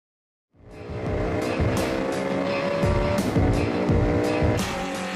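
Nothing is technically wrong with this audio; the smooth fade-in from around half a second to 1.76 s is a deliberate edit, rising gradually without any click or hard edge.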